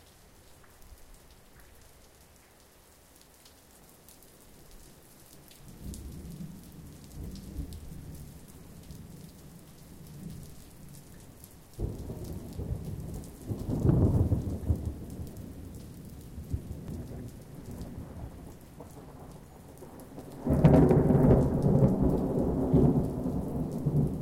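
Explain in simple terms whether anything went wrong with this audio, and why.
Something did go wrong, twice: at 1.56 s and again at 16.88 s the sound jumps forward by about a tenth of a second. That's compressed frames skipped. The file is stored in chunks just under 93 ms long, and at each of those spots roughly one chunk never got played, either missing or thrown out by the decoder as damaged.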